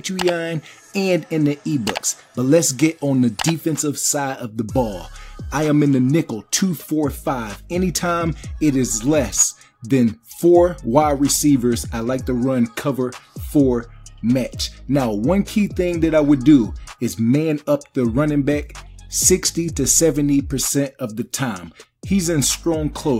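Sample clock jitter runs through the entire clip: the converter's timing wanders by something under half a microsecond, so each sample lands a little off its proper instant. Steep, fast-changing parts of the waveform suffer most, leaving a faint grainy hiss about 45 dB below the signal that swells with loud, bright passages and disappears in silence. A spectrogram shows a diffuse noise haze, strongest at high frequencies, tracking the signal's energy; the waveform looks intact.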